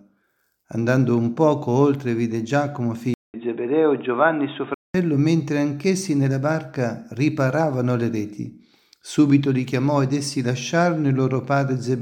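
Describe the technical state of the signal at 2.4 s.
Nothing at 2.4 s points to a technical fault, and the signal is intact at that moment.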